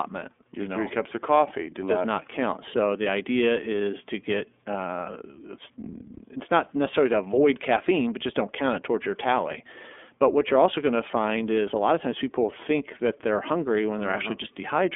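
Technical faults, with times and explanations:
Throughout, iLBC codec: the speech is squeezed into a telephone band of roughly 250 Hz to 3.5 kHz, with nothing at all above 3.7 kHz, so it sounds thin and boxed-in. Each 30 ms block is coded on its own without help from the previous one, which leaves a plainly audible rough, slightly synthetic grain on the speech. That behaviour fits iLBC's 13.33 kbps mode.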